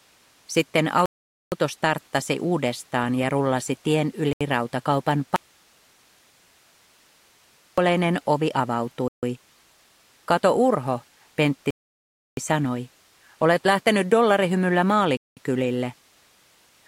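Bluetooth stalls at 1.06, 4.33, 9.08, 11.70 and 15.17 s cut the sound to silence for 0.08 to 0.67 s, likely because interference delayed packets and drained the headphones' buffer. An audio dropout to a faint residue from 5.36 to 7.78 s leaves only hiss, around 35 dB below the signal, likely because the signal was lost while the downstream path stayed live.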